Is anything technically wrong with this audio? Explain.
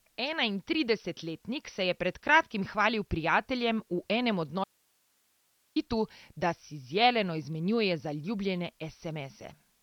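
Yes, two faults. Throughout, MP2 compression is the likely cause: starved 32-band coding has switched off everything above 6.2 kHz, leaving dull, gurgling speech that fits roughly 48 kbps, granular unlike smooth low-pass filtering.

From 4.64 to 5.76 s, just after "enem od", an audio dropout to a faint residue: the signal likely broke off while the path stayed live, leaving hiss about 40 dB down. It starts and ends abruptly, unlike a pause or fade.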